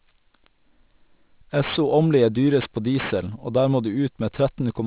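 Aliasing runs through the whole speech clip: resampling without a filter, which points to an 8 kHz rate, folds energy above 4 kHz back down as fairly strong gritty sibilants. Plain band-limiting would just sound dull.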